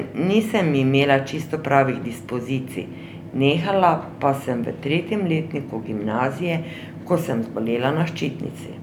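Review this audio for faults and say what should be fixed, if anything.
Sample clock jitter from 6.48 s to the end at 8.82 s: a rough hiss that rises on loud, bright speech and disappears in pauses, about 40 dB below the signal. Unlike steady background noise, it follows the waveform's slope, which fits timing wander of a few microseconds. Prevent it with a stable, low-jitter converter clock or a clean external reference.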